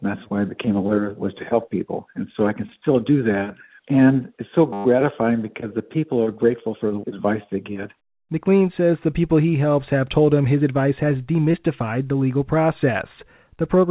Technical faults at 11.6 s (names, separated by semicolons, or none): short concealed packet loss